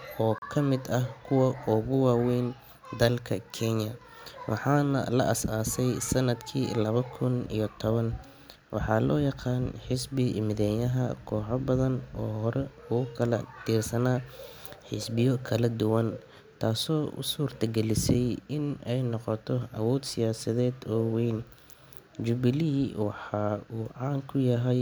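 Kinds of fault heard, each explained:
Block of digital silence: speech cuts out and back with no fade, unlike a faded dropout: a 36 ms hole at 0.38 s, a 6 ms tick at 18.14 s.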